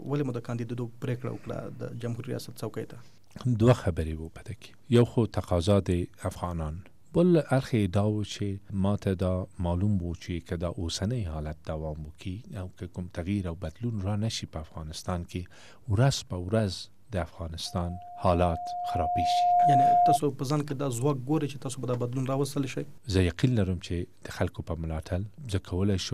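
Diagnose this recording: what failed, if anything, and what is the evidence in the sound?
Loudspeaker feedback squeal, 17.66 to 20.19 s: a 709 Hz tone swells over about two seconds to roughly 10 dB above the sound, as speaker-to-microphone loop gain exceeded one.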